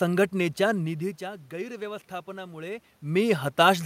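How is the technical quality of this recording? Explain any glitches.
No glitches; the recording has no technical faults.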